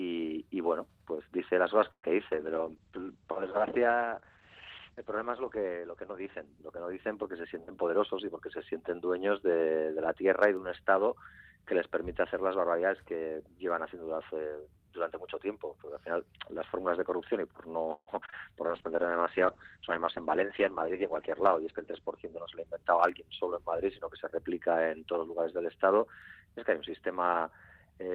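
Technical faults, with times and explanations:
1.91–2.05 s, call audio freeze: the sound stalls for about 0.14 s, trailing off into roughly 80 ms of silence before resuming where it left off, so nothing is lost, only a pause inserted. This is likely packets delayed in transit leaving the jitter buffer empty.
2.33–9.54 s, call bitrate drop: the encoder rate falls from 64 kbps to 10 kbps, staying at its lowest for about 3.3 s. Coarser coding makes the sound rough and watery, and bandwidth narrows from 20 kHz to 8 kHz, dulling the top end.
7.44–8.99 s, jitter buffer speed-up: playback runs at 108% while pitch stays put, as the receiver trims short pitch-period slices, around 150 ms in total, to shed excess buffered delay. The result sounds hurried.
17.94–18.34 s, repeated packet loss (robotic sound): three holes in quick succession, the longest 134 ms, are each patched by extending the preceding sound, covering 43% of the span. 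The repeated patching gives a choppy texture, with 40 ms genuinely missing.
18.21 s, skip ahead: playback jumps forward almost seamlessly, dropping roughly 70 ms of audio while later material was already queued. The two sides of the cut are butted together, so a fragment simply vanishes rather than leaving an audible gap.
18.66–18.97 s, jitter buffer slow-down: playback drops to 88% speed at unchanged pitch as single pitch periods are repeated, adding 48 ms to rebuild the buffer reserve. Sounds are drawn out.
18.68–25.74 s, call bitrate drop: a second fall from 64 kbps to 9 kbps, bottoming out for about 2.3 s. Bandwidth again narrows from 20 kHz to 8 kHz, so the sound turns muffled and coarse, with watery smearing until the rate recovers.
20.42–22.38 s, jitter buffer speed-up: the sound runs at 106% with pitch held constant, as repeated removal of short pitch-period pieces, roughly 150 ms altogether, cuts buffered delay. 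Tempo audibly tightens across this stretch, giving a hurried feel.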